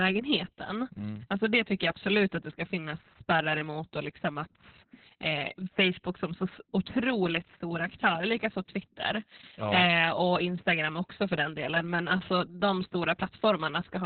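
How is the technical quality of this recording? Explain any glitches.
Poor, because the whole recording has passed through Opus voice compression at a starved rate. Throughout the clip the codec runs its SILK speech coder in narrowband mode, which points to a bitrate around 6 kbps. Nothing survives above 4.4 kHz, so the speech sounds muffled and telephone-like. The excitation is coded so coarsely that the voice turns hoarse and slightly robotic.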